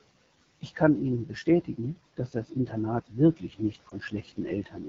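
From start to finish the speech carries the sound of the AMR wideband (HD Voice) codec running at a low rate. The encoder models the voice as pulses through a vocal tract filter up to 6.4 kHz and fills the band above that, to 7 kHz, with shaped noise. The audible roughness and raspy texture suggest one of the lower AMR-WB modes, consistent with 8.85 kbit/s, where the excitation is too coarsely coded to sound clean.

At 3.89 to 3.95 s, just after "wirklich nicht", a lost AMR speech frame produces a brief dip. A corrupted frame failed its check, so the decoder repeated the previous pitch and vocal tract parameters at reduced gain to conceal it. The disturbance is short and matches a single missing 20 ms frame. As the decoder resumes normal frames, the voice returns weak or rough for a moment.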